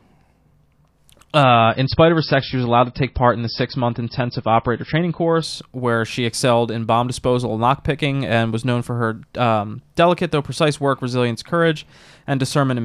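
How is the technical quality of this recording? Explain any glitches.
There's one glitch worth flagging. From 1.43 to 5.43 s, a slowed connection drops the adaptive stream to a lower bitrate: nothing above 5.6 kHz, swirly artefacts, and sudden gapless switches in and out.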